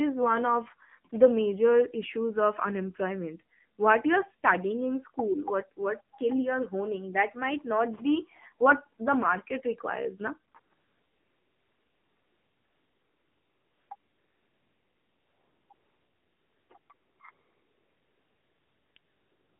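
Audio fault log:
Throughout: AMR narrowband mobile codec. The speech is confined to a phone band of about 150 Hz to 3.4 kHz, and the damage is plainly audible: a buzzy, synthetic voice quality, which fits a low AMR-NB mode around 7.4 kbps. On a spectrogram the energy stops flat below 4 kHz, with a smeared, pulse-driven harmonic texture in each 20 ms frame.
1.1 s: AMR comfort noise. One 20 ms frame in which the real background is swapped for smooth synthetic noise, heard as a tiny hiss-like blip.
10.52 to 19.6 s: AMR comfort noise, a run of nine replacements starting just after "the market requires na". They range from 20 ms to about 3.2 s, the longest from 10.74 to 13.90 s. The decoder stops receiving speech frames and fills the gaps with steady generated noise, so the real background is replaced. On the waveform the noise sits at a flat, even level that switches abruptly in and out. On the spectrogram it shows as a featureless band with hard edges in time.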